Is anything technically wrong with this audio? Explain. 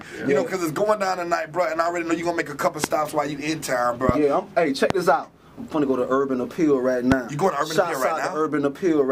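Yes, there are four loud pops, at 2.84–2.86, 4.09–4.11, 4.90–4.93 and 7.12–7.14 s. Each is a single sharp pop lasting about 20 ms, peaking roughly 20 dB above the surrounding sound, which carries on underneath. The likely cause is a brief voltage step or pulse, from a plug, switch, static or driver glitch, shaped by the following circuitry. On a waveform each shows as a tall, narrow spike; on a spectrogram, a thin vertical stripe spanning the full frequency range.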